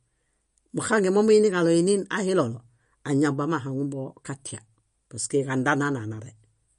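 MP3 compression, likely, runs throughout: nothing is present above 10.6 kHz, and plainly audible watery swirl suggests weak frequency lines dropping out, which fits a 40 kbps bitrate.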